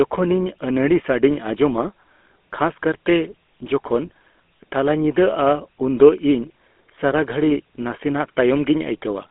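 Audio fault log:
Throughout: GSM full-rate codec. The speech is held inside a telephone band of roughly 250 Hz to 3.5 kHz, so it sounds thin, with no low body and no upper air. A plainly audible buzzy, gravelly roughness sits on the speech. This is how a 13 kbit/s GSM full-rate coder sounds: it models the vocal tract as a filter and drives it with a coarse, regularly spaced pulse excitation rather than the real waveform.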